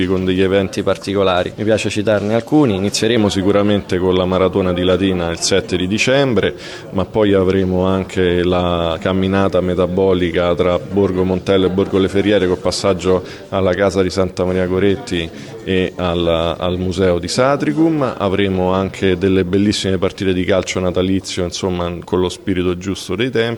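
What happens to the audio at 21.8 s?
Nothing goes wrong at 21.8 s; the audio plays through that moment intact, with no dropout, click, distortion or other fault.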